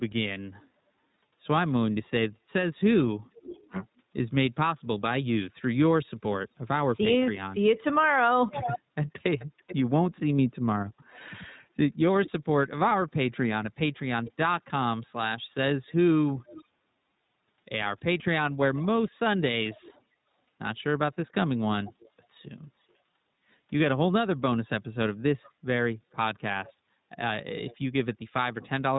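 Throughout, the iLBC codec, which fits a 15.2 kbps mode with 20 ms frames, removes everything above 4 kHz and leaves speech rough and synthetic. There are no gaps, which sets it apart from packet loss. An echo leak follows at 3.4–3.7, 7.33–12.3, 14.25–14.32, 16.39–16.64, 18.19–20.01, 21.83–22.79 and 25.43–27.76 s. A distinct copy of the speech arrives about 0.43–0.44 s late, from about 10 to 25 dB down. It is a separate repeat rather than a reverberant smear, and it likely comes from an echo canceller on a loudspeaker side that let its output back in.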